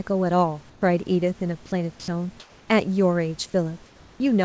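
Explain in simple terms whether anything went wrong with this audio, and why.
Two related problems show up, both tied to how a call system handles pauses.

The first is comfort noise in place of the background, at 0.70 to 0.82 s and again at 2.40 to 2.68 s. In these gaps between speech, the real room background gives way to a smooth, even hiss with none of its natural texture, then the genuine background returns. The likely cause is the sending side going quiet during pauses and the receiving side filling each gap with generated noise that imitates the room's background.

The second is sound dropped by the voice detector, at 2.00 to 2.08 s. For this short stretch the speech itself is cut, with about 40 milliseconds of it lost and replaced by the same kind of steady synthetic noise. This was likely the voice detector mistaking a quiet piece of speech for background and briefly stopping transmission until it picked the speech up again.

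Both happened on a call connection that carries nothing above 8 kHz, which is why the audio has nothing in its highest frequencies throughout.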